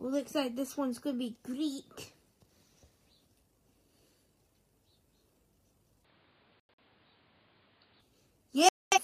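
From 6.04 s to 8.01 s the audio loses everything above 5 kHz and picks up a different background noise about 35 dB down, with no gap and no jump in level, then returns to full brightness. That points to the input likely having switched to a poorer device, rather than a simple filter, since the noise floor changes too. Two abrupt holes of pure silence, at 6.60–6.83 s and 8.69–8.99 s, are corrupt frames muted. Their lengths fit a few whole codec frames refused by the decoder, and the timing around them stays intact, which separates them from a stall or skip.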